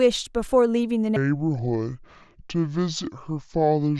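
At 1.16 s the speech drops into a section at the wrong speed, which lasts to the end. It plays at 0.625 times its recorded rate, likely from playback on the wrong clock. Pitch falls about seven semitones with it. The voice turns deep and sluggish.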